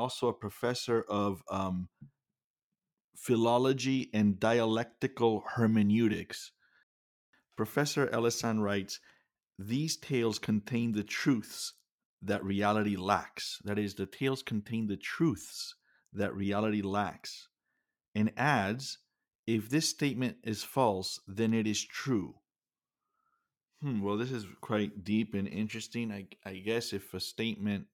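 Right after "a professor of" at 1.44 s, clicks tick by every 1.63 s until 27.56 s: clock drift buffer slips, likely two clocks about 100 ppm apart dropping or repeating about 7 samples each time.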